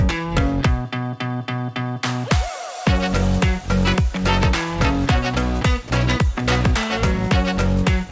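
At 5.88 to 5.90 s the sound briefly gives way to a soft, steady noise for about 20 ms, and roughly 10 ms of real sound is lost. This is likely sound dropped by the voice detector, with comfort noise filling the gap. The audio has passed through a G.722 call path at 64 kbps, so nothing is heard above 8 kHz.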